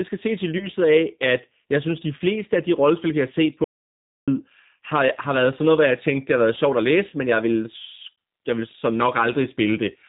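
Speech carried through the G.729 codec at 8 kbit/s, whose damage is plainly audible across the clip. Everything above 4 kHz is gone, and the voice is rebuilt from a vocal tract filter plus a few pulses per frame, so it sounds rough and slightly synthetic. VoIP packet loss concealed by the speech codec appears at 0.58–0.67 s after "skal ses i" and at 7.10–7.13 s after "har været sjovt at", just before "men jeg vil". Each gap is about 20 ms, which fits two lost 10 ms frames. The decoder stretched its last pitch and filter into a fading fill, and the voice stays weak as it recovers. An audio dropout to silence runs from 3.64 to 4.28 s, after "rollespil vi har set". The signal falls to silence for about 0.63 s with no room tone, likely because the input link was briefly lost, and whatever was said in that span is missing.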